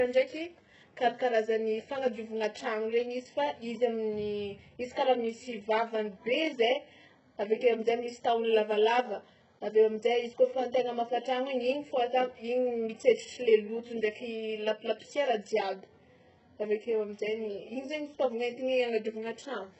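From start to end, the speech is heavily damaged. Nothing reaches above 8 kHz. The treble that does remain sounds synthetic. S sounds come out gritty, lispy and metallic. This is likely HE-AAC compression. The codec keeps only the lower bands and rebuilds the top by copying them upward under a coarse envelope. The copied harmonics do not line up with the real ones. The damage fits a very low bitrate, around 8 kbps.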